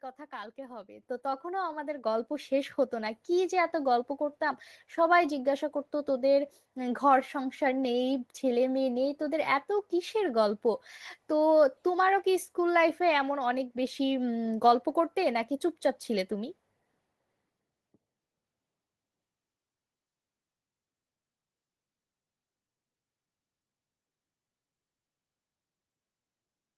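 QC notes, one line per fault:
1.02 s and 2.04 s, microphone volume stepped up: the whole speech signal, voice and background noise alike, jumps louder at once, by about 9 dB and then about 5 dB, as the call software raises the microphone's input volume in two abrupt steps.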